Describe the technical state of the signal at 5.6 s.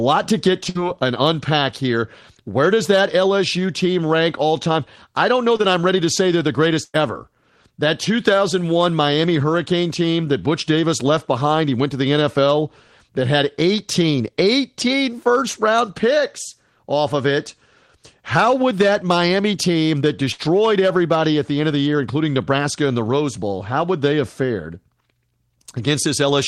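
Right after "time I don't know", from 5.57 to 5.61 s, there is a short concealed packet loss: about 20 ms of the call failed to arrive in time, and the receiver covered the gap by extending the preceding sound, following its pitch where voiced and shaping noise where not, before blending back before "I'm ready to say". It comes across as a brief smear or wobble. Unlike a plain dropout, there is no silent gap.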